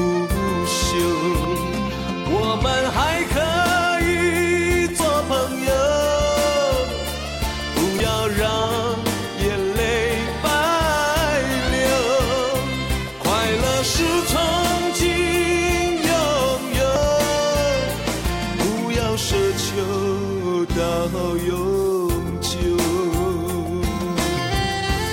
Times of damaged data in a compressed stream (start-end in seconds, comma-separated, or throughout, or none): 4.97-5.00, 7.97-8.00, 16.93-16.96